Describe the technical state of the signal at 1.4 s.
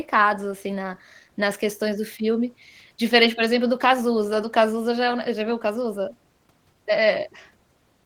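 At 1.4 s you're hearing Opus voice compression, which runs through the whole clip. The speech has that low-rate hybrid sound, with SILK doing linear prediction on the lower band and CELT patching in the range above 8 kHz. It still reaches up to about 20.2 kHz, but the excitation is coded coarsely, so the voice comes out hoarse and faintly robotic. That fits roughly 16 kbps in 20 ms frames, and the damage is plainly audible.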